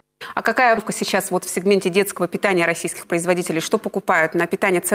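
At 0.77 to 0.79 s there is a skip ahead. A stretch of roughly 0.7 s never reaches the listener. Later audio was already queued, so playback leaps straight to it. Nothing fills the gap. The two sides of the jump butt together almost directly. The sound lurches forward abruptly, with a chunk plainly missing. Playback now runs about 0.7 s closer to live than before.

From 0.89 s to 4.72 s comes a jitter buffer speed-up. The buffer still holds more audio than it wants, so the receiver trims it down. It cuts many short slices, each one or a few pitch periods long. Roughly 0.2 s is removed in total. The sound plays at 105% speed with unchanged pitch. It comes across as slightly rushed and compressed in time.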